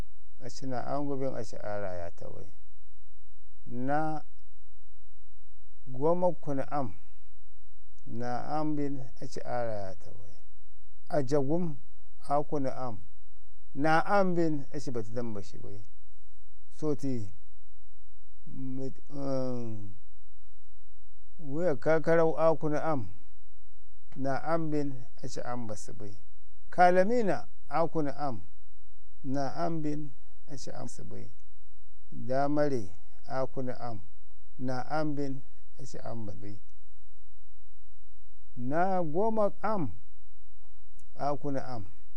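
From start to finish the speech carries a DC offset: the whole waveform sits shifted away from the zero line by a constant amount. You cannot hear it as such, but it eats into headroom on one side. On a waveform display the trace rides visibly above or below centre, and a spectrogram shows a steady band of energy pinned at the very bottom, near 0 Hz, for the full length.

At 7.96 s the audio jumps forward. This is compressed frames skipped: whole blocks of coded audio were lost or rejected as damaged, and the decoder carried on from later material. Roughly 100 ms of speech is missing, which fits about two frames of 42.7 ms each. The same fault returns at 30.83 to 30.87 s and at 36.29 to 36.31 s, each dropping around 150 ms, consistent with about four frames. On a spectrogram it shows as an abrupt discontinuity in the speech patterns. On the waveform it looks like a sudden change in shape.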